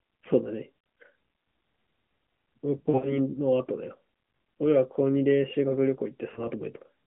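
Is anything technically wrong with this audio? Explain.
Yes: lost AMR speech frames at 0.80–0.84 s, 2.78–3.19 s and 6.34–6.48 s. The decoder recycles the last good pitch and vocal-tract settings at falling gain, so 0.80 s gives a brief warbling dip. Near 2.78–3.19 s the losses are scattered, with the longest stretch, about 80 ms, sounding smeared and fading. The 6.34 s event is a single short wobble. Unlike a dropout's hard silence or click, each gap is smeared and decaying, within the narrowband 150–3400 Hz mobile sound.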